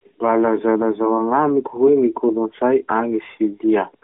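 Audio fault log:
Nothing to log here, since no faults turn up anywhere in this speech recording.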